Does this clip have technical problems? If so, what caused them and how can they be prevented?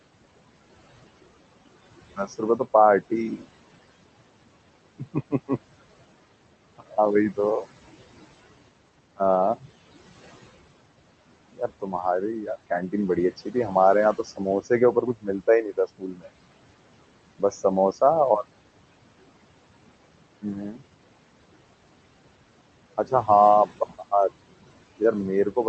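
Yes. Noise suppressor artifacts run throughout. The suppressor pulls the background down by about 20 dB, but its band-by-band gain keeps shifting frame to frame. The room noise, sitting about 16 dB under the speech, dips between phrases and swells underneath them. A gentler reduction depth and slower gain smoothing would prevent this.

Speech cut by the noise suppressor also occurs. The suppressor mistakes quieter parts of the speech for noise and turns them down with the background, by roughly 12 to 21 dB. Parts of the speech sound swallowed at 2.17–3.45 s, 4.99–5.50 s, 6.78–7.38 s, 9.16–9.66 s, 11.53–16.29 s (the longest, about a second affected), 17.39–18.02 s, 20.42–20.83 s and from 22.98 s to the end. A more conservative suppression threshold that protects low-level speech would prevent this.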